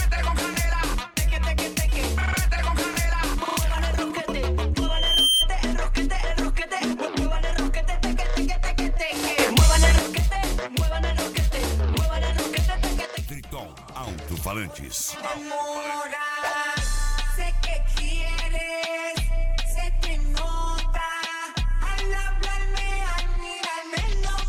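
At 4.8 s a loudspeaker feedback squeal takes hold: a 3.2 kHz tone swells over roughly half a second to a few dB above the sound before breaking off at 5.48 s. Then at 9.38 s everything, background noise included, leaps up about 8 dB until 9.99 s, and at 13.05 s it drops about 6 dB until 14.07 s. Both jumps are likely sudden gain jumps, with the gain stepped without a ramp.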